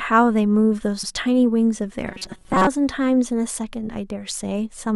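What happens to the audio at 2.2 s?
Robotic sound from repeated short buffers runs from 2.07 to 2.67 s, covering the 2.2 s mark. The likely cause is new audio arriving too seldom, so the player keeps looping the most recent fragment, roughly 5 ms long, in place of the audio it skipped. For most of that span the speech is replaced by repeats, and the loop imposes a fixed 188 Hz pitch, turning the voice into a stiff metallic buzz that still loosely tracks the speech.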